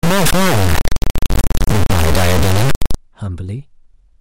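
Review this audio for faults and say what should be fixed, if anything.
Integer read as float, from 0.0 to 2.95 s: the speech's 32-bit integer samples are being interpreted as 32-bit floats, so their bit patterns decode to values either near zero or far beyond full scale. The output slams between silence and clipping, producing an extremely loud, harsh square-wave buzz that drops out where the sound is very quiet.

To prevent it, make sure the sample format declared in the file header or stream setup matches the format the samples were actually written in, and convert explicitly between integer and float rather than reinterpreting raw bytes.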